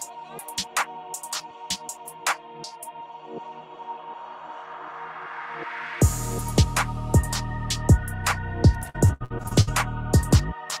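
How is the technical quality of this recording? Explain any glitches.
One glitch stands out, near the end. From 8.89 to 9.69 s there is repeated packet loss. Data went missing in eight quick bursts, the longest about 72 ms, and each gap was filled by extending the sound just before it. With about 40% of that stretch patched, the audio turns choppy and robotic, with pieces dropping out.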